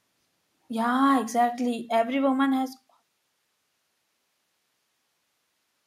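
Nothing faulty can be heard anywhere in this speech.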